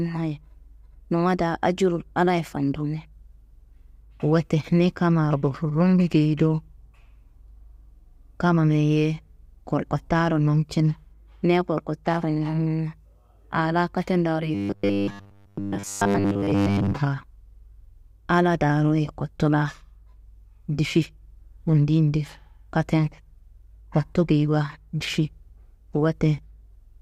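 After "aa laa katendaaro", 14.55–16.94 s carries robotic sound from repeated short buffers: a fixed 100 Hz buzz, likely replayed 10 ms chunks, not gaps.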